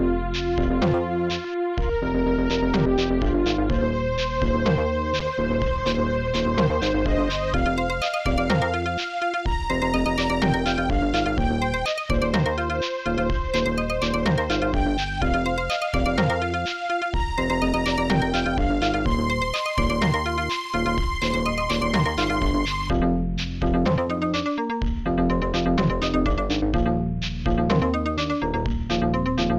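A call bitrate drop begins at 5.2 s and lasts until 7.44 s. The sound turns coarse and loses detail, which fits the encoder falling from roughly 96 kbps to about 24 kbps and staying low for around 2.2 s. A second call bitrate drop runs from 21.33 s to 25.58 s, with a similar degradation pointing to about 28 kbps, held for roughly 2.9 s. Both come from a falling bandwidth estimate that forces coarser coding until the rate recovers.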